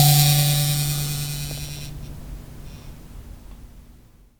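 No technical faults heard anywhere in the music; nothing to flag.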